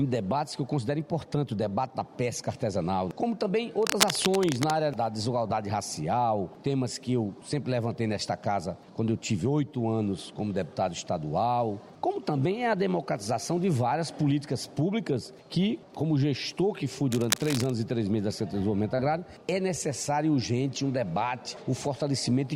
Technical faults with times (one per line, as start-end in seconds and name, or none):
3.83-4.71 cable scratch noise
17.12-17.70 cable scratch noise
18.95-19.00 short concealed packet loss